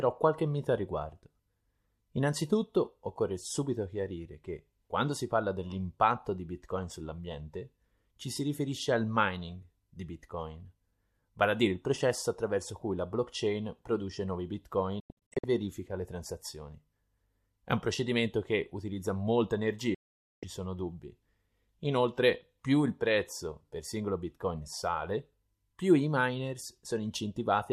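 Twice the receiver lost the digital stream and muted until valid frames returned, a digital broadcast dropout. At 15.0 s, after "la blockchain produce nuovi", about 0.29 s vanishes in short holes spread over 0.43 s. At 19.94 s, after "procedimento che utilizza molta", a solid 0.48 s silence cuts in abruptly.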